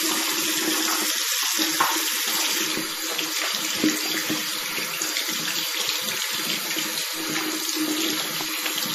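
A recording of sounds. A thin whistle at one pitch near 5.4 kHz sits well below the sound from 0.0 to 2.0 s, likely feedback whistle from a loudspeaker-to-microphone loop. The whole clip sounds watery, with smeared attacks and nothing above 15.2 kHz. This points to MP3 compression at a low rate, around 40 kbps.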